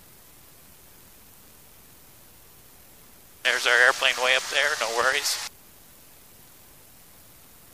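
A short irregular burst of scratchy crackle cuts through the audio from 5.01 to 5.13 s, the signature of loose connector crackle: a worn contact intermittently breaking, chopping the signal.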